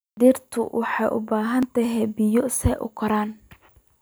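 At 1.63 s the capture side most likely fell behind, so the hardware overwrote samples before the program collected them. That is a dropped buffer (overrun). A few milliseconds of audio, around 5 ms, vanish, and the speech on either side is spliced straight together with no gap of silence. The sound skips slightly ahead at that instant.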